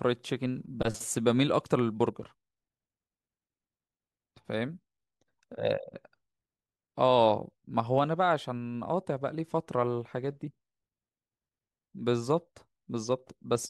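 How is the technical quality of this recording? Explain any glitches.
The technical quality of the recording is sound, with no glitches to explain.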